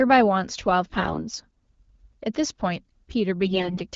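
Speech carried over an AMR-WB (HD Voice) link, with light codec damage that fits a rate around 12.65 kbit/s. Two bursts of AMR bit errors occur, from 0.85 to 1.21 s and from 3.46 to 3.81 s, with the second one heavier. In each burst the less protected bits in the coded frames were corrupted, but the check over the core bits still passed, so the decoder played the bad frames instead of concealing them. The misplaced excitation pulses and slightly wrong gain and spectral values make the voice hoarse, scratchy and gargly, while its pitch and level stay roughly in place.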